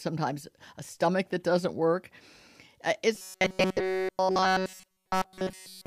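From 3.15 s to the end, robotic sound from repeated short buffers gives a rigid 188 Hz buzz, likely a looping 5.3 ms buffer, seen as evenly spaced harmonic lines.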